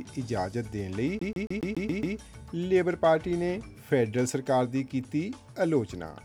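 From 1.19 to 2.17 s the sound stutters rapidly, the same 139 ms fragment repeating seven times with a brief mute at each jump. This is a CD stuck on one turn: a scratch knocks the laser back a track at the same point every revolution.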